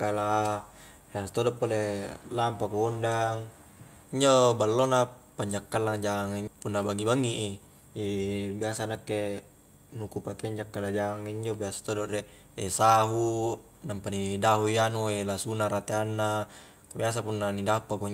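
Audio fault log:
6.47–6.49 s, skip ahead: roughly 0.4 s of speech is dropped and playback jumps forward with no gap, so the two sides butt together abruptly. The waveform shows a hard splice with mismatched phase, and the spectrogram shows harmonics and formants breaking off discontinuously.
7.15–7.82 s, jitter buffer speed-up: the receiver trims short pitch-period pieces repeatedly to shed excess buffered delay, about 70 ms in total. Speech runs at 109% speed with unchanged pitch and sounds hurried. Syllables look compressed in time, while harmonic spacing on the spectrogram stays unchanged.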